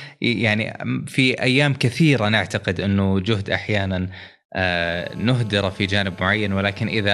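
From 4.81 s to 7.09 s a GSM phone buzz sits under the speech. A nearby 2G handset on a call pulses its transmitter about 217 times a second, and the audio circuitry rectifies those bursts into a steady, harsh rasp about 25 dB below the signal. A spectrogram shows a comb of harmonics stacked on 217 Hz, and the waveform carries a regular pulse train.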